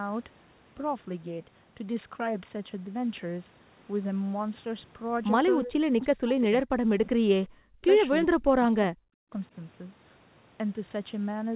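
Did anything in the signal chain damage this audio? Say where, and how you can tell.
Yes. The speech drops out at 5.64 to 7.16 s, 7.63 to 7.87 s and 8.25 to 9.32 s, each time by roughly 40 dB. The likely cause is speech suppressed in double talk. In call processing, the echo canceller confused the talker with loudspeaker echo and turned both down.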